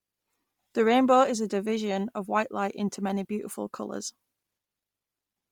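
Speech runs through with a breathy, grainy edge from start to finish, and the top end sounds hollowed out and refilled with hiss. That's heavy Bluetooth LC3 compression, most likely a low-rate link somewhere around 32 kbps with 10 ms frames stripping the upper spectrum.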